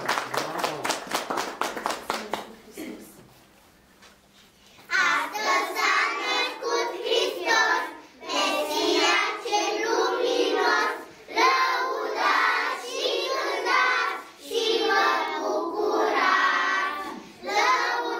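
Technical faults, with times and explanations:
15.28 s and 16.47 s, bit error spike: two isolated single-sample ticks, the first peaking at about -24 dBFS and the second a little quieter at about -30 dBFS. Each is one corrupted sample where a flipped bit threw the value off by a power of two before it snapped straight back. Because the jump lasts only a single sample, it's effectively an impulse, so you hear a bright, broadband click that has nothing to do with the surrounding sound.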